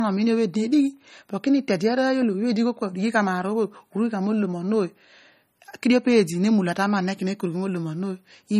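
Low-bitrate audio saved at a high bitrate, present throughout the speech: nothing remains above 15.1 kHz, and the band below carries the smeared, swirly character of heavy MP3 compression. This likely comes from an MP3 encoded at around 32 kbit/s and later re-saved as a much larger MP3, which fits roughly 190 kbit/s. The second encoding could not restore the detail the first discarded, so the coarse artefacts and the missing top end remain.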